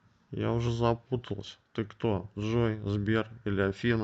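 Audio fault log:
throughout, clock drift between sender and receiver: faint, unevenly spaced hiccups recur across the clip, because the sender's clock runs about 3% slow and the receiver's buffer keeps draining.
0.28–3.7 s, repeated timing corrections: the tempo drags slightly with small stutters as the receiver repeats short pieces to keep pace, playing at 97% speed and adding roughly a tenth of a second.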